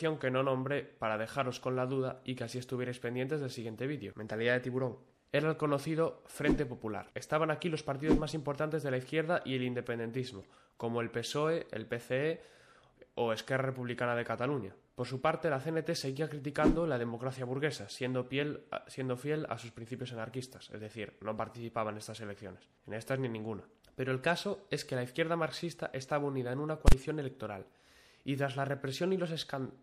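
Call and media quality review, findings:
Throughout: watery, swirling texture; bright transients smeared, metallic chirps on sibilant or cymbal-like detail. Likely cause: MP3 compression, with a treble ceiling and thin high band consistent with a low bitrate around 64 kbps. Encoder starved of bits zeroes weak frequency lines frame to frame. Spectrogram: hard horizontal cutoff, speckled on/off patches below it.

10.42–10.46 s: brief squawk/blip. Component: damaged data in a compressed stream. Decoder hits corrupt bytes, misreads frames, loses sync, resumes at next header. Spectrogram: broadband smear or garbage block ~36 ms wide; waveform discontinuity at the resume point.

26.88–26.92 s: single loud bang. Component: DSP stage producing invalid numbers at full scale. Infinite or invalid values clamped to max, holding output pinned for the 40 ms block. Waveform: flat slab far from zero, beyond the audio's peaks, with vertical edges; spectrogram: full-height bright stripes at both edges.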